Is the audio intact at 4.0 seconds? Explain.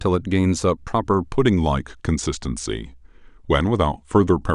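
No. At 4.0 s the audio shows a wrong sample rate fault, which runs from 1.36 s to the end of the clip. The samples play back slower than they were captured, with no rate conversion, so speed and pitch drop together. The speech runs at 0.919 times normal speed and sits 1.47 semitones low, sounding slightly sluggish and deepened. That ratio fits 48 kHz material being played at 44.1 kHz.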